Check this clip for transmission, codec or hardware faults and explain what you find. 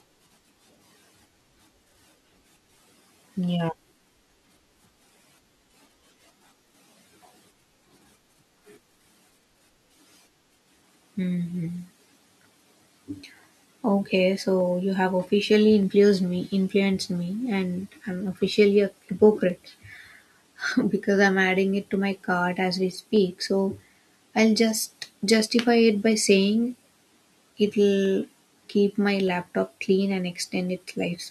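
A clock mismatch between two devices in the chain is the likely cause of clock drift buffer slips heard from 1.16 s to 30.50 s. The two clocks disagree by something like 150 ppm, so the buffer between them creeps until a handful of samples is dropped or repeated to catch up. In this speech, each slip that lands while someone is talking is a click; there are about thirty slips in all, returning steadily every 1.22 s.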